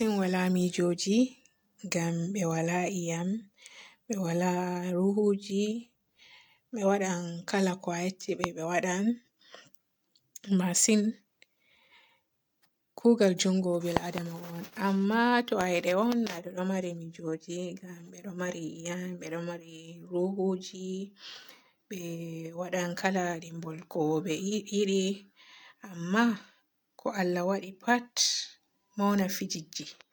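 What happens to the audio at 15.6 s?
At 15.61 s there's a loud pop, a single sharp click lasting only until about 15.63 s and jumping roughly 20 dB above the speech around it. The speech carries straight on underneath without a break. The likely cause is a sudden voltage step or spike, from a plug being touched, a switch, static or a driver glitch, landing on the signal. The following circuitry smooths that step into the short, hard thump you hear.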